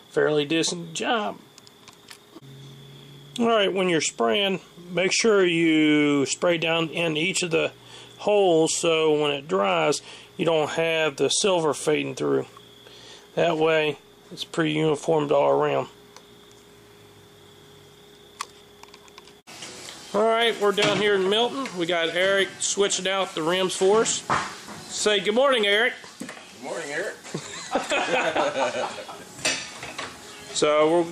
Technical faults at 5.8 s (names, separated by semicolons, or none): none